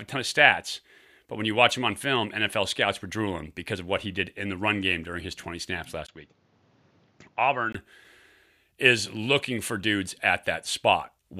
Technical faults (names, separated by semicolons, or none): input switched to a poorer device